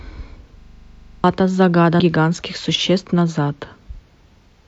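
A speech recording with two distinct faults. From 0.60 to 1.24 s there is a system hang loop: a single 40 ms segment repeats exactly 16 times, giving a steady buzz-like stutter at 25 Hz. The host or driver stalled while the audio hardware kept replaying the same ring buffer, so the material that should have filled that stretch, roughly 0.7 s of speech, never arrives and playback resumes past it. From 1.95 to 2.00 s there is damaged data in a compressed stream, heard as a brief chirp or blip. Corrupted bytes in the encoded stream caused the decoder to misread the affected frames and lose sync until it locked onto a valid frame header again.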